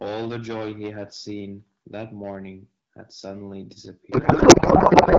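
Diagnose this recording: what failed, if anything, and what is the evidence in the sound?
The failure is at the codec stage, a codec payload misread. From 4.11 s to the end at 5.18 s, the speech turns into garbled noise and warble that barely tracks it, which fits the AMR-WB stream's octet-aligned packing being unpacked as bandwidth-efficient, so every field lands in the wrong bits.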